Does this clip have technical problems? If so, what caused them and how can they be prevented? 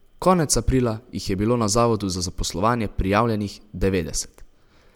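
No, this clip has no technical problems, so there is nothing here that needs preventing.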